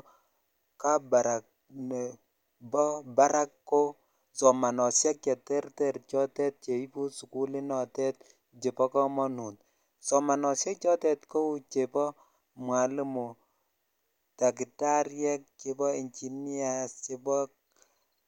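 Nothing here calls for comment, since no technical fault turns up anywhere in this speech recording.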